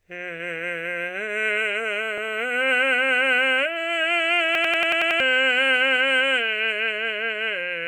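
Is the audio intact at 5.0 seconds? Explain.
No. At 5.0 seconds the music is caught in a system hang loop running from 4.55 to 5.20 s. The machine stalled while the hardware replayed one 92.88 ms piece, which fits a 4096-sample buffer, seven times. It stutters like a machine gun at 10.8 Hz, and roughly 0.7 s of music is lost.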